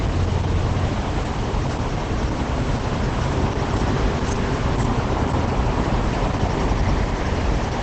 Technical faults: Opus compression

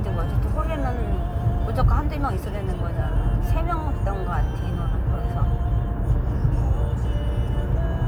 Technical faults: none

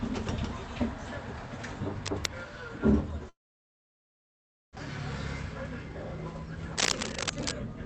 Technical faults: cable scratch noise; long network dropout

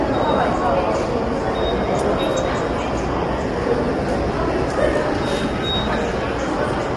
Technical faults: low-delay AAC compression

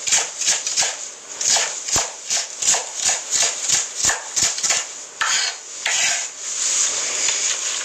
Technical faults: Vorbis compression

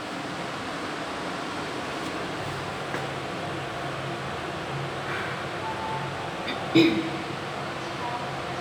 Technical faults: none

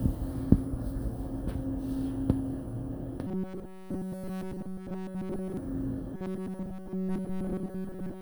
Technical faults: robotic sound from repeated short buffers

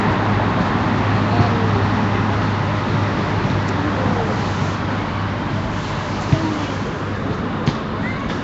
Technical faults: Nellymoser compression

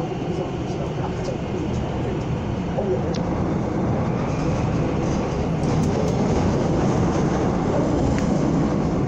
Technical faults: damaged data in a compressed stream

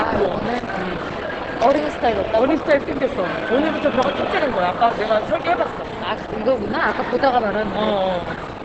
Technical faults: Opus compression

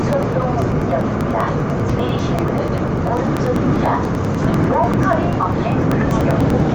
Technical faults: periodic USB or driver dropouts

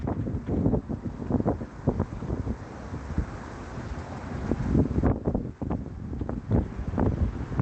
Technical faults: lost packet rebuilt from error correction

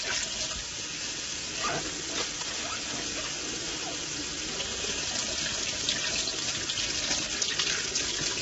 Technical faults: low-delay AAC compression

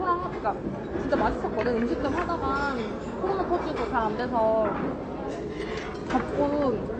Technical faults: AAC compression

